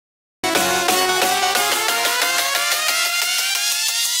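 The recording began late: capture only engaged at 0.44 s, after the sound was already under way. The first 0.44 s is digital silence, then the audio jumps in mid-sound with no natural attack or fade-in, a classic cut-off start.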